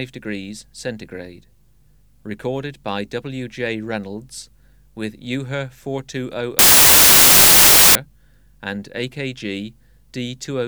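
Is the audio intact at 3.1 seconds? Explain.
Yes, at 3.1 seconds the audio runs through cleanly with no dropout, click, distortion or other fault.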